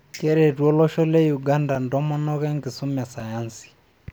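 At 1.75 s, just before "ntomonok enkisuma e", and again at 3.20 s, right after it, a block of digital silence of about 5 ms cuts the speech to zeros and back abruptly. Each gap is heard as a tick. The waveform shows a flat gap, and the spectrogram shows a thin vertical broadband stripe.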